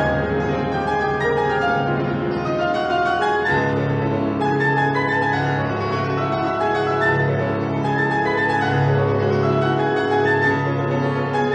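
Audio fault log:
No faults were heard anywhere in this clip.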